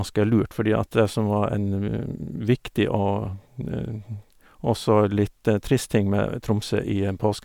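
No technical faults are audible.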